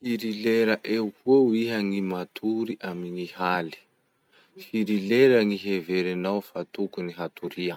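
No technical faults occur at any point in the recording, so there is nothing to describe in time order.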